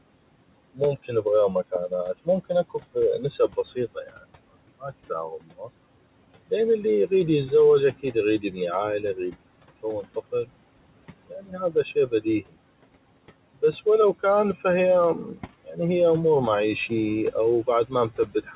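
From the start to the end, noise suppressor artifacts are heard. The room noise sits about 19 dB under the speech. The suppressor pulls it down by about 18 dB between phrases, then lets it back under speech.

Four times, there is speech cut by the noise suppressor. It mistakes quiet parts of the speech for noise and turns them down with it. The first cut is at 3.48 to 4.23 s, with drops of about 10 dB. The next is at 11.28 to 12.54 s, the deepest at about 17 dB. Then 15.27 to 15.78 s, just before "هيه امور", and 16.89 to 18.45 s, just after it, both about 13 dB. Each leaves a fraction of a second faint or swallowed.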